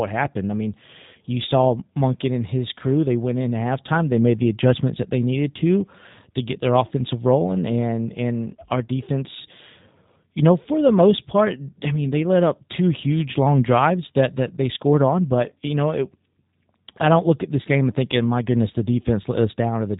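From start to finish the speech carries plainly audible G.729 codec damage, consistent with an 8 kbit/s low-rate coder that rebuilds each 10 ms frame from a filter, pitch predictor and sparse pulses. It sounds rough and synthetic, and a spectrogram shows nothing above about 3.8 kHz.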